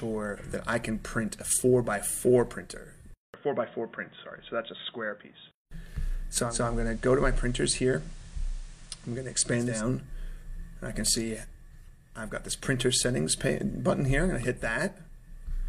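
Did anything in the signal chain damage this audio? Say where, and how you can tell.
Yes. From 3.14 to 5.71 s the audio goes boxy, with a 200 ms silence at the switch, a drop of a few dB and a faint new noise floor. This is likely an input switched to a poorer device at the driver stage. The gap and the changed noise set it apart from a codec narrowing its bandwidth.

From 6.38 to 9.84 s, digital radio blending to analogue FM takes over with a smooth 252 ms cross-fade and no gap. Hiss rises well below the signal and the level dips about 1 dB. The hiss and the wider band distinguish it from a device switch.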